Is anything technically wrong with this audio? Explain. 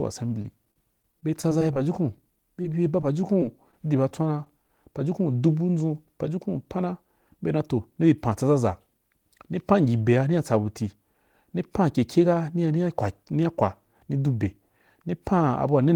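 Yes. From 0.42 to 4.69 s, just before "pajukun dubu ndʒun pajukun", brief ticks and smears mark scattered short gaps. Around twenty lost or late packets, none much over 20 ms, were patched by extending the preceding sound.

From 7.91 to 8.44 s, after "pana be dan toh", the speech sounds hurried at unchanged pitch. This jitter buffer speed-up ran at 106%, trimming roughly 40 ms of pitch periods to shrink an overfull buffer.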